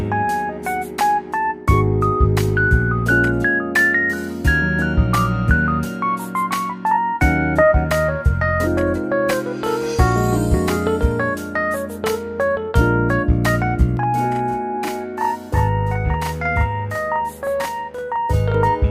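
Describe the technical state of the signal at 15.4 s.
At 15.4 s you're right in the middle of a channel delay (doubling) that runs from about 13.97 s to 18.55 s. One channel is trailing the other by 40 ms, and once the two get folded down to mono, that late copy doesn't blend in. It sits there as a distinct second hit at the same level, so every onset gets a tight slap right behind it, a sort of doubled, stuttery edge on the sound.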